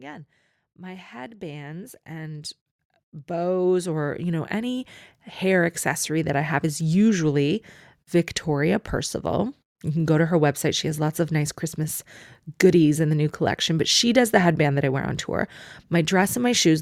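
Automatic gain rising appears twice in this speech clip, from 0.62 to 2.61 s (about 8 dB) and from 3.26 to 6.91 s (about 11 dB). Each time the gain control judged the input too quiet and raised its level gradually, so voice and background swell together.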